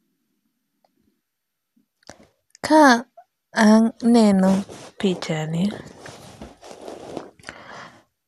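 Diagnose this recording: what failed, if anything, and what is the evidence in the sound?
Codec stage, likely MP2 compression: speech sounds dull and gurgling throughout as bit-starved sub-bands switch off; a spectrogram shows nothing above 12.2 kHz and flickering bands.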